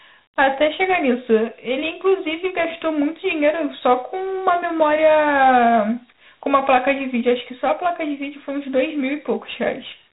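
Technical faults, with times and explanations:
Throughout, Dialogic VOX ADPCM. Nothing is heard above about 3.8 kHz, so the speech sounds muffled and telephone-like. A gritty hiss rides on the speech and rises and falls with it. Each sample is coded as a small 4-bit step from a prediction, so the step error turns into noise that tracks the signal. The damage is plainly audible. The narrow band and grain fit 4-bit OKI ADPCM at 8,000 samples a second, about 32 kbps.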